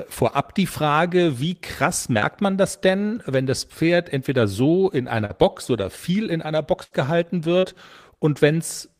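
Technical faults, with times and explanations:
2.19–2.24 s, 5.26–5.31 s and 7.59–7.65 s, short concealed packet loss: Roughly 20 ms of audio is missing between "wie krass" and "man das denn wenn", and about 40 ms each after "entweder so in" and at 7.59 s. The receiver extended the preceding sound, then crossfaded back, leaving a brief smear or wobble.
6.83–6.93 s, burst of packet loss: After "oder viel in einer", about 80 ms of consecutive audio never arrived in time. The decoder prolonged the last sound, attenuating it across the gap, which gives a held buzz or fading hiss before playback resumes with that stretch missing.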